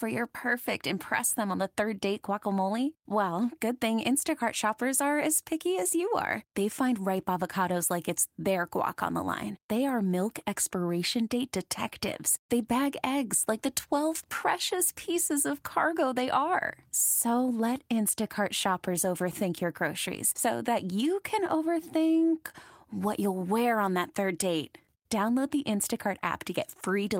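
No technical faults can be heard anywhere in the recording; the speech signal stays continuous and steady at every moment.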